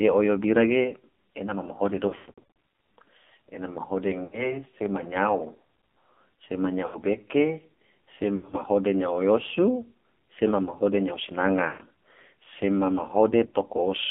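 Throughout, the speech carries the AMR narrowband mobile codec. On a spectrogram, energy sits between 200 Hz and 3.5 kHz with nothing above. The heavy buzzy, synthetic coloring points to a low rate of around 5.9 kbps.

Lost AMR speech frames occur at 2.08 to 2.50 s (after "ge ena ma mahode", scattered, longest gap 120 ms), 4.24 to 4.54 s, 6.86 to 6.97 s, 8.36 to 8.56 s, 11.68 to 11.82 s (after "sema mahode nyao") and 13.46 to 13.54 s. In each, the decoder repeats the last pitch and spectral shape at falling gain. This is heard as warbly, stretched sound that fades, seen as smeared, frozen harmonics and a sagging waveform envelope.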